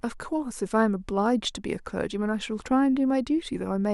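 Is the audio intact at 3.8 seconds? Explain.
Yes, the audio is intact at 3.8 seconds, without any dropout, glitch or other audible fault at that point.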